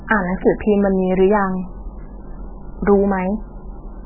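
Throughout the speech, the sound is dull and watery, with a swirling, bubbly texture and metallic chirps around s sounds, while consonant onsets smear. Nothing is heard above 3 kHz. The likely cause is heavy MP3 compression: starved of bits, the encoder cut off the treble at 3 kHz and dropped weak frequency lines that flicker on and off from frame to frame. The damage fits a very low bitrate, around 8 kbps.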